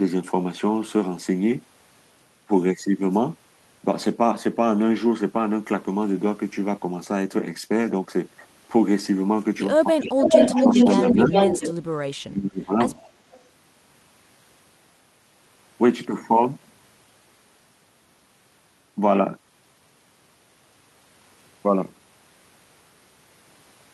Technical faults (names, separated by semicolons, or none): speech suppressed in double talk; echo leak